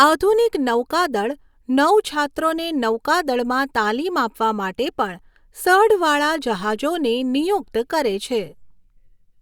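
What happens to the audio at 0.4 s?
Nothing goes wrong at 0.4 s; the speech there plays through intact, with no dropout, click or distortion.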